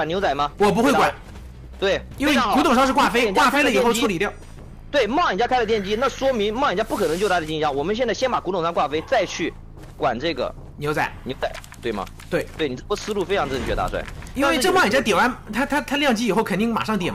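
A loud pop cuts through the sound twice, at 3.49 to 3.51 s and at 11.43 to 11.45 s. The second pop is louder, roughly 10 dB above the signal. The sound continues underneath. Each is likely a sudden voltage pulse, such as a switch or static discharge.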